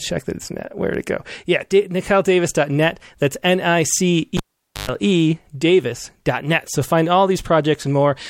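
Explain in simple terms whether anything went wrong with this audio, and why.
A cable was pulled and plugged in at 4.37 s: a pop, about 0.47 s of near silence, a 0.11 s burst of 50 Hz mains buzz as the plug's tip touched, then another pop at 4.89 s. That buzz separates it from a simple dropout.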